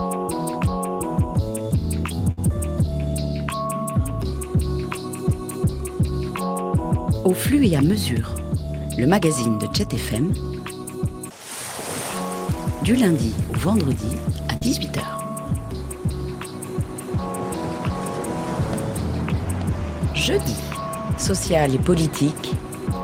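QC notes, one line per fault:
2.31 to 2.39 s, burst of packet loss: the sound freezes into a held buzz or hiss that fades, then jumps ahead with about 60 ms of audio skipped. A short run of packets arrived too late or not at all. The receiver stretched the last sound it had for 56 ms, lowering its level as the gap went on. It then resumed at a later point, so the stretch in between never plays.
14.57 to 14.63 s, short concealed packet loss: a brief smear or wobble in the sound, lasting only a few hundredths of a second before it settles. About 40 ms of audio did not reach the decoder in time. The receiver covered the hole by continuing the preceding sound for those 40 ms, then blended back into the real signal. Nothing is skipped beyond the concealed stretch.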